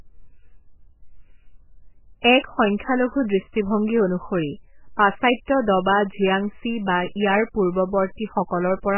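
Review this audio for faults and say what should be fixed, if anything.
MP3 compression, throughout the clip: nothing above 3 kHz and a heavy watery, swirling texture, likely from a bit-starved MP3 encoder that cut the treble and let weak frequency lines flicker between frames, which fits a bitrate near 8 kbps. Encode at 64 kbps or more, or keep a lossless master.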